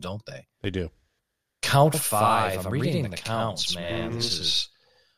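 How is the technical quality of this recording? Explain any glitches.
From 1.94 s to the end of the speech, the recording suffers a channel delay (doubling). One channel falls behind the other by about 85 ms, which fits a 4096-sample buffer, and when the two are folded into mono the late copy does not blend. It arrives as a separate, equally loud repeat just behind the original, so every syllable is followed by a distinct slap echo that makes the speech sound doubled.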